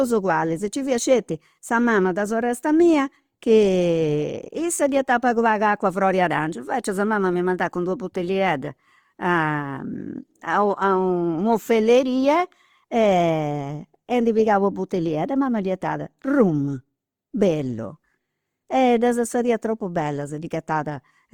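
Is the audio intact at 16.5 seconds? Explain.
No. At 16.5 seconds, as across the whole clip, the speech carries plainly audible damage, likely from Opus compression in its CELT music mode. With too few bits, the encoder keeps each band's energy but fills the detail with folded copies of lower bands or noise, so voiced sounds turn rough, grainy and noisy rather than swirly. Bandwidth stays full, reaching about 20.2 kHz, and the degree of damage fits a rate near 24 kbps.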